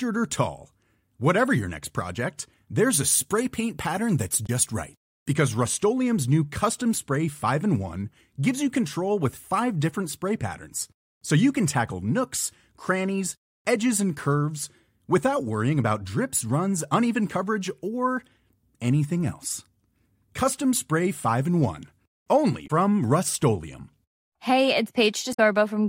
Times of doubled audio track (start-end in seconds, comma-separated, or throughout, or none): none